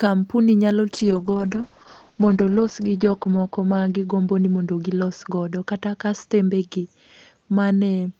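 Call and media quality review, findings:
Call bitrate drop, 0.93 s to end. Speech turns rough and muffled, highs cut from 20 kHz to 8 kHz, worst for 1.18 s. Opus encoder starved after bandwidth estimate fell, coding more coarsely; sound points to 32 falling to 7 kbps. No recovery.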